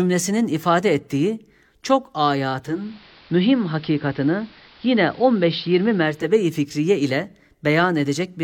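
From 2.58 to 6.37 s there's a digital radio blend to analogue. The receiver lost digital and cross-faded over 0.39 s to the AM broadcast just ahead of "fikriye ile". Hiss sits around 30 dB down, and level shifts about 1 dB before it blends back.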